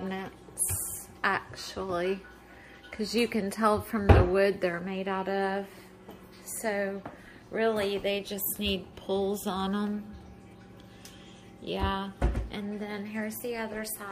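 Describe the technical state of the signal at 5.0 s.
At 5.0 s the signal is intact, with no audible fault present at that moment.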